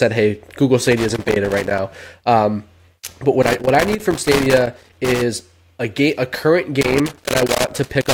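Speech is interrupted by loose connector crackle three times: from 0.87 to 1.79 s, from 3.42 to 5.22 s just before "a game a current", and from 6.81 s to the end, just after "a game a current". A worn or dirty contact is making and breaking, chopping the signal into an irregular scratchy burst. On a waveform the audio shows ragged dropouts and sharp spikes. A spectrogram shows scattered full-band vertical streaks.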